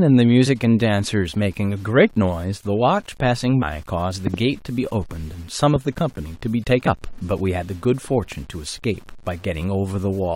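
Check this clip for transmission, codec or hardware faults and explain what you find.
Three kinds of fault are present in this speech clip: coarse quantisation across the whole recording, two jumps where compressed frames went missing, and two pairs of loud pops.

Low bit depth without dither affects the whole clip. The sound was most likely reduced to very few levels, consistent with rounding to about 8 bits, with no dither added to break up the error. That error tracks the waveform, so it is heard as a grainy, gritty distortion that changes with the speech. It sits roughly 30 dB below the signal and is most exposed in quieter stretches and decaying sounds.

Compressed frames skipped occur at 3.61 s and 6.86 s. The decoder never played a run of frames, either because they were absent or because it rejected them. At 3.61 s the audio jumps ahead by about 150 ms, which fits several 23.2 ms frames. 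At 6.86 s the jump is about 100 ms. Because adjacent frames overlap, each join is a short smeared blip with a small piece of speech lost, not a hard click.

Loud pops occur between 4.27 and 4.36 s and between 5.76 and 6.00 s, with two pops in each pair. A sudden voltage step or spike, likely from a connector, a switch or a driver glitch, was added to the signal. The first pair peaks about 15 dB above the speech and the second about 10 dB above it. Each is heard as a sharp double pop or thump on top of the speech, which continues underneath.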